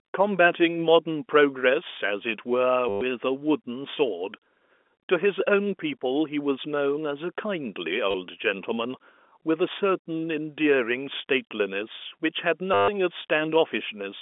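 Packet loss with last packet repeated occurs at 2.89–3.01 s, 8.11–8.14 s and 12.74–12.88 s, lasting 120 ms, 30 ms and 140 ms. The receiver replayed the last packet to fill each gap, so the narrowband telephone sound stutters robotically, with a buzz near 100 Hz that fits 10 ms packets.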